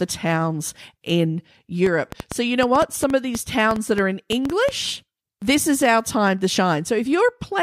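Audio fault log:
1.86 to 4.70 s, train of clicks: a burst of sharp, near-identical pops rides on top of the speech at an uneven pace of about 5.7 per second, roughly fifteen in all, some peaking around 10 dB above the speech so they cut through clearly and tick audibly in the gaps between phrases too. Repeated short pulses of the same shape arriving in a cluster like this likely come from electrical interference or a faulty connection or power supply.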